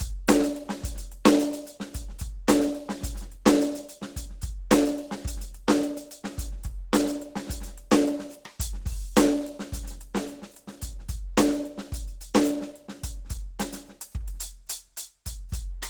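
From start to finish the music sounds hoarse, grainy and somewhat muffled, with sustained tones roughened into a noisy texture, while content still reaches about 20.1 kHz. This plainly audible damage is likely Opus compression at a very low rate, which fits roughly 16 kbps. At that rate the encoder falls back to its hybrid speech-oriented mode, modelling the lower band as if it were a voice and filling the upper bands with coarse approximations instead of the real detail.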